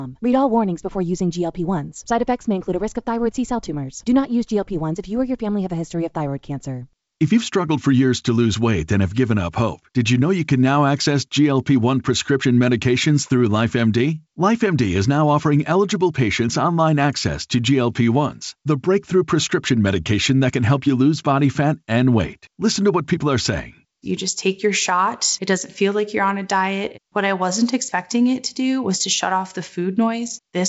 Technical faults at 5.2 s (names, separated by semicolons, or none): none